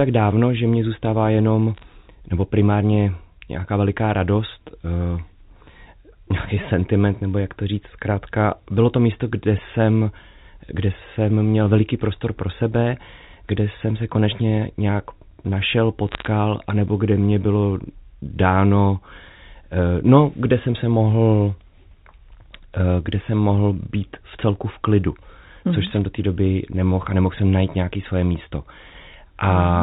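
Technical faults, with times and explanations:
1.75–1.84 s, 16.09–16.27 s and 25.87–25.97 s: bit errors on a digital phone line. Three short bursts of crackle land right after "že mě zůstává jenom", after "se konečně nějak našel", and just before "do té doby nemohl". Roughly a third of a percent of bits get flipped. Since the mu-law line carries each sample as one 8-bit code, every flipped bit changes a single sample. When it hits a high-order bit or the sign of a loud sample you get a sharp tick sitting over otherwise intact speech.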